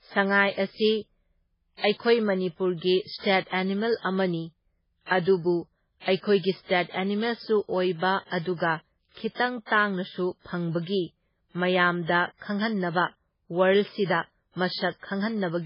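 The whole clip shows heavy MP3 compression damage. Nothing survives above about 5.3 kHz, so the speech sounds dull and boxed in. Weak frequency lines drop in and out between frames, giving a watery, swirling texture. The s sounds turn metallic and chirpy. This is likely an MP3 encode starved of bits, and the damage fits a very low rate near 16 kbps.

Pre-echo appears at 3.18 s and again at 9.65 s. Each time, a short hiss leads a sharp attack, spreading 59 ms and 56 ms ahead of it. The codec spread its noise across a whole block. Noise sized for the loud onset leaked into the quiet moment before it. The attacks sound soft and smeared.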